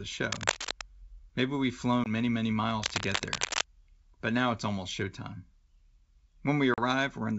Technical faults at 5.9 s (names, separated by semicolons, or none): none